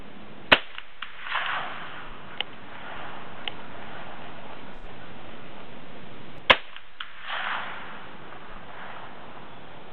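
At 2.06 s there's a brief AAC frame loss with concealment. For about 43 ms the decoder patches over a missing frame by reusing the last good spectrum, so you hear a short smeared, noisy blip rather than a gap. The same thing happens at 4.75 to 4.86 s, where the patch runs about twice as long, and again at 8.50 s.

From 2.96 to 6.38 s there's a doubled audio track. A full-band copy trails roughly a second behind, about 5 dB quieter, with no room colour, and cuts in and out abruptly. It's likely a second, slower capture path mixed in.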